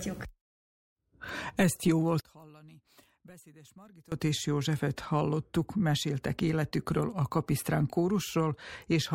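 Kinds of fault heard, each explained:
One channel inverted: From 2.20 to 4.12 s the speech almost vanishes, dropping by about 26 dB and leaving only a faint trace of itself instead of a full, centred voice. The likely cause is reversed polarity on one stereo channel, so when the two channels are combined into one, the centred speech they share cancels out and only the small difference between them survives. The sound returns to its normal level after 4.12 s.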